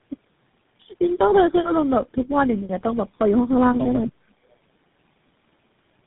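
From start to finish the speech carries the marks of tandem speech coding: it sounds rough, dull and warbly in a way one codec alone would not produce, which points to a chain of several speech codecs, GSM full rate among them, each re-coding the previous one's damage. On a spectrogram the energy stops flat at 3.8 kHz. The harmonics look smeared and broken, with grainy noise filling the gaps between them.

Between 4.07 and 4.34 s the talker is abruptly turned down, dropping by about 35 dB in places, with roughly a fifth of a second affected in patches. The sound thins and chops rather than fading smoothly. The likely cause is speech suppressed in double talk: an echo canceller that could not tell this talker from loudspeaker echo while the far side spoke, and so attenuated both. The waveform shows a ragged notch in the envelope there.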